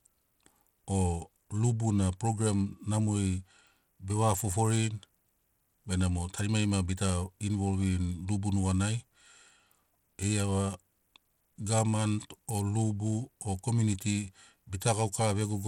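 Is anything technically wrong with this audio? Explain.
Yes. Throughout the speech, the link was likely squeezed through Bluetooth SBC compression with a small bit pool, fitting roughly 96 kbps. Starved upper sub-bands lose bits, so treble flickers and nothing survives above 18.6 kHz, while coarse quantisation leaves plainly audible grit and aliasing.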